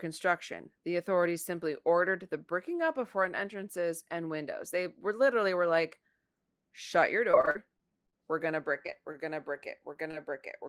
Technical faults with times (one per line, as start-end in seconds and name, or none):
7.31-8.15 repeated packet loss (robotic sound)
8.83-9.16 repeated packet loss (robotic sound)
9.93-10.15 short concealed packet loss